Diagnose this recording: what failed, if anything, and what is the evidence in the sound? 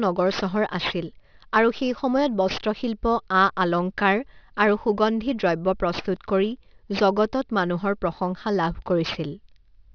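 Aliasing throughout, from the sample-rate conversion stage: sibilants sound gritty and metallic, with content running hard up to a 5.5 kHz edge, which fits a drop to an 11 kHz rate without filtering. Folded energy sits roughly 15 dB below the speech, and unlike codec artefacts it doesn't swirl or vary over time.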